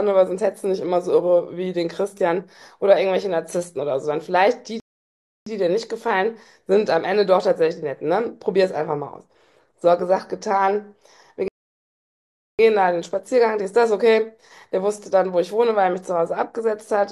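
The speech cuts to silence at 4.8 s for 0.66 s and again at 11.48 s for 1.11 s, then picks up exactly where it stopped each time. These are rebuffering stalls: the player exhausted its downloaded audio and waited for more, adding time without losing any speech.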